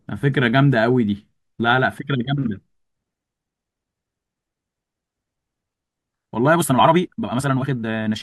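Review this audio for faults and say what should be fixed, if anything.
From 6.53 s to the end at 8.22 s, the speech suddenly runs at 1.75 times its pace while the pitch holds steady. It sounds rushed. This is a time-stretched section, likely from software squeezing audio to fit a slot by dropping short pieces. Prevent it by editing content to length instead of compressing time.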